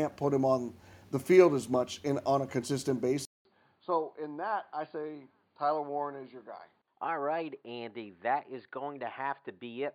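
The recording likely switched to a poorer input device at 3.25 s, just after "in on a consistent". In this speech clip, a 0.2 s silence marks the switch. Afterwards the voice turns dull, with nothing above 4.7 kHz, drops about 10 dB, and carries a faint new noise floor.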